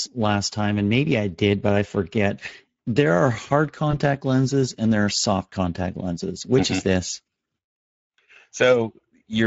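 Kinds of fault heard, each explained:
Speex codec: noisy, hoarse speech throughout, plainly audible damage from a low-bitrate CELP coder, which fits a rate near 16.8 kbps starving the excitation.
VoIP packet loss concealed by the speech codec: a brief stretched, fading smear at 3.91 s, where the decoder stretched its last pitch and filter over a missing 20 ms stretch.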